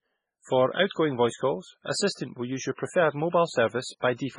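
Speech that sounds watery and swirly throughout, with nothing above about 10.4 kHz; this is likely heavy MP3 compression at a very low bitrate, around 16 kbps.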